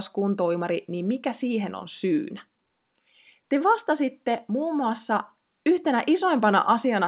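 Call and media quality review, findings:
No faults found.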